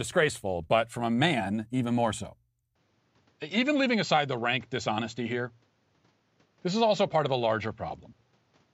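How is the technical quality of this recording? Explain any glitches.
The recording has one clear flaw. From 2.75 s, right after "man even more so", to the end, the speech abruptly loses everything above 7.6 kHz and gains a faint new background noise, with no gap and no level jump. The cause is likely an input switched to a poorer device. The new noise floor, rather than the dulling alone, sets it apart from a simple low-pass filter or codec change.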